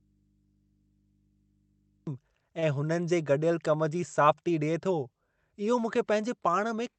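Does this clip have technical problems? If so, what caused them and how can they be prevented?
Yes. From the very start of the clip to 2.07 s there is an audio dropout to a faint residue: the wanted signal is already missing when the clip begins, and the gap holds only mains hum, roughly 40 dB below the level the speech reaches once it arrives. Because the path stays live and carries hum rather than true silence, the likely cause is an input that was open but not yet receiving signal, such as a source still connecting or a fader or mute released late. The onset is abrupt, not a fade-in. Prevention: confirm the source is connected and unmuted, and gate or trim the lead-in before the recording starts.

Between 2.59 and 2.65 s there is a short stall from a late packet. A packet missed its playout time, so the jitter buffer ran dry and the receiver held the last sound for about 30 ms until the packet arrived. 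Playback then resumed from the same point, so nothing is lost, but the speech briefly hangs with a slight buzz or dip, and everything after it is about 30 ms later. This is heard on a WebRTC call path through an Opus codec limited to 8 kHz. Prevention: run an adaptive jitter buffer with enough headroom for network delay swings, and keep the link free of competing traffic.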